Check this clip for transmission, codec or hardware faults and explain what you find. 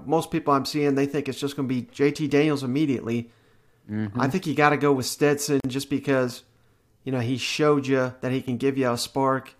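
One fault is present in the speech. A gap at a join of encoded pieces opens at 5.60–5.64 s: a 43 ms gap, the encoder's start delay and end padding left in between separately encoded segments. Speech drops out and resumes where it stopped. The waveform and spectrogram show a flat, full-band blank with smeared edges.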